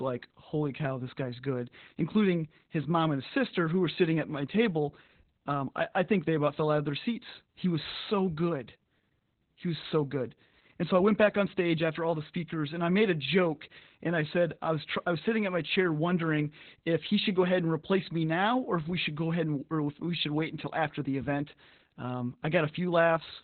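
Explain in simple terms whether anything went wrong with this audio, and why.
The speech sounds muffled, slightly hoarse and a bit robotic from start to finish. That is Opus voice compression working hard: to save space it cuts everything above about 4.2 kHz and codes the voice roughly, losing its crispness throughout.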